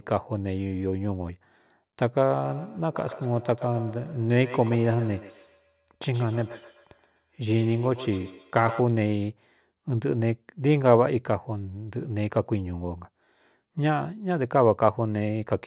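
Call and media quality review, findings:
Feedback echo between two devices, 2.45 to 8.92 s: speech returns at roughly 150 ms intervals, repeats thinner and ringing, peaking about 15 dB below the direct speech. Probable component: a second device in the room replaying this microphone's audio into it again. The local echo canceller cannot remove playback from another device. Audio is band-limited to 4 kHz throughout, consistent with G.711 mu-law narrowband.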